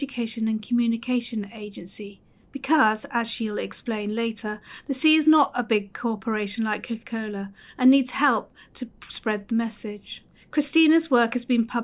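Nothing here stands out as a technical fault, so there's no problem to point to anywhere in the recording.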